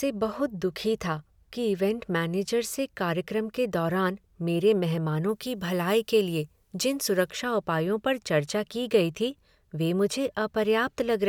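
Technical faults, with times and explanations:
5.29 to 7.29 s, pre-emphasis left on: a treble boost was never undone, lifting 10 kHz about 8 dB relative to 1 kHz, which fits the CD 50/15 µs curve. The speech turns thin and sibilant. A spectrogram shows this two-second block visibly brighter in the upper bands.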